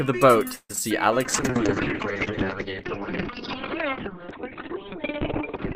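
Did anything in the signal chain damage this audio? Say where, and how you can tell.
Yes. Repeated packet loss (robotic sound) on the network, 0.55–0.81 s: four gaps, longest 141 ms, are patched by repeating earlier sound. The waveform shows looped, smeared cycles and brief dropouts.

A call bitrate drop at the codec from 1.26 s onward, 48 to 6 kbps, strips everything above 4 kHz. The spectrogram shows a hard ceiling there, and the coarse coding sounds watery.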